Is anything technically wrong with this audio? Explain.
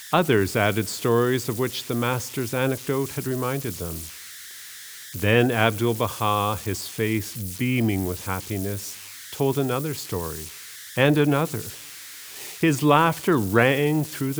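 Yes. Converter idle tones run throughout the speech. An undithered delta-sigma converter locks into repeating bit patterns at low input levels, producing a whistle around 2 kHz in the pauses and grainy noise under quiet passages, roughly 16 dB below the signal.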